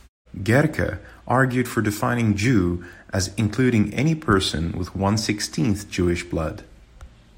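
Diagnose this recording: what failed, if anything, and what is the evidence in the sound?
Nothing failed in this recording.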